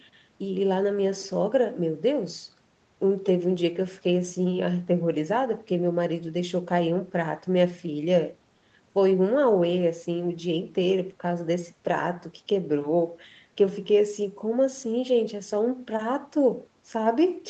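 Speech recorded over a call, with no technical faults to be heard. The top end stops at about 8 kHz, as expected from the call's normal microphone processing and a band-limited call codec such as Opus.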